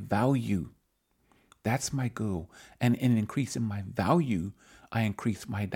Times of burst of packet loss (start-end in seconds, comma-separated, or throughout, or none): none